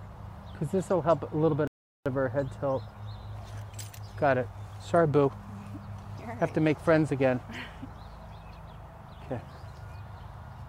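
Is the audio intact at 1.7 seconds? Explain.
No. A rebuffering stall runs from 1.67 to 2.06 s: the player exhausted its downloaded audio and waited, adding 0.38 s of silence before the sound resumes exactly where it stopped.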